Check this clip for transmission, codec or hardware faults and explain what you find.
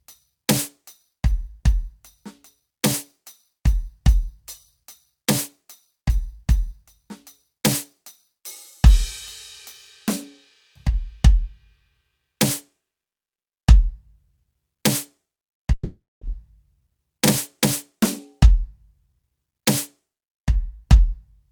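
One fault stands out in the music, a long network dropout from 15.73 to 16.24 s. The last sound smears into a fading buzz, then about 230 ms of near-silence, likely because no packets arrived. Unlike a brief packet-loss glitch, about 480 ms of music is skipped when playback resumes.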